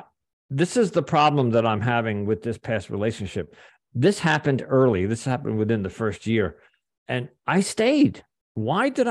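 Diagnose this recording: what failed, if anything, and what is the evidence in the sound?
Likely a drift correction step in buffering: at 4.06–4.69 s, after "with this past relationship", and 7.59–8.36 s, speed jumps 6%, a semitone sharp, then snaps back, unlike wow's gradual glide.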